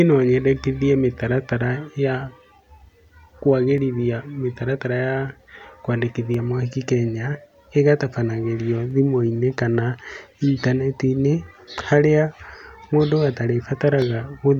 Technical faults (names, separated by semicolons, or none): clock drift buffer slips